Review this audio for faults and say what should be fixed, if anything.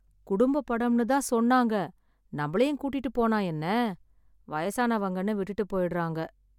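No faults can be heard anywhere in the speech. Nothing needs to be fixed.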